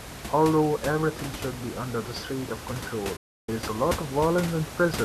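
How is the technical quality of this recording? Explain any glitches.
There's one clear glitch: a digital broadcast dropout from 3.16 to 3.49 s. The receiver stopped getting usable frames, either because the signal vanished or because frames failed their checksum, so it muted instead of playing garbage. The speech fades out over about 8 ms, leaving roughly 0.31 s of silence, which fits 13 lost frames, then picks up mid-stream. Whatever was said in that gap is gone. The room noise, about 10 dB under the speech, drops out with it.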